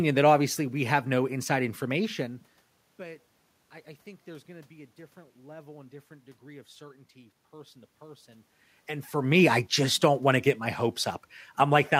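Nothing's wrong on the system side here: the room noise is just part of the recording, and the level changes around 2 s and again a little after 8 s are only the talker shifting closer to or farther from the microphone.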